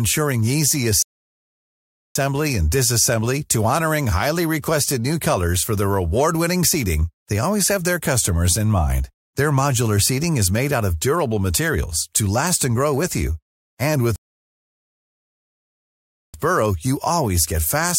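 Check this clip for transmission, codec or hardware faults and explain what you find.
Two rebuffering stalls interrupt the speech, from 1.02 to 2.16 s and from 14.16 to 16.34 s, adding about 1.1 s and 2.2 s of silence. The player exhausted its downloaded audio and paused until more data arrived. Unlike a packet-loss dropout, where the gap swallows part of the speech and it resumes further on, each stall picks up exactly where it stopped. Nothing is missing; the pauses only lengthen the clip.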